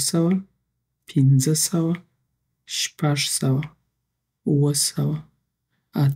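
Nothing in this speech recording stands out as a technical problem at any point, so there's nothing to flag here.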